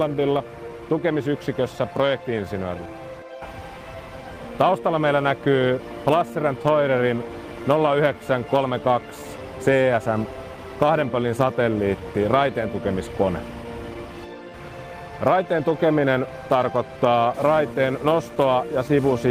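Clock drift between sender and receiver runs through the whole clip: the sending clock is about 4 percent slow relative to the receiver's, so the jitter buffer keeps draining and the receiver has to fill the gap with sound it never got.

Repeated timing corrections run from 0.08 s to 19.14 s, repeating short slices to stretch playback to 96 percent speed and adding roughly 0.7 s overall. They are heard as small, unevenly spaced hiccups and a slightly dragging, unsteady tempo.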